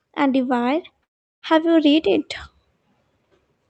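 Automatic gain rising from 0.14 to 2.33 s: the level control judged the speech too quiet and lifted its gain by about 8 dB, so voice and background swell together. Call audio freeze from 1.03 to 1.45 s: a brief fading fill gives way to about 0.37 s of silence, likely from delayed packets draining the jitter buffer, after which speech resumes where it stopped with nothing lost.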